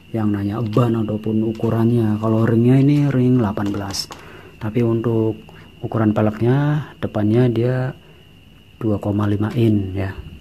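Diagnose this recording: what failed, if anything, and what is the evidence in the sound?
Nothing failed; no faults heard.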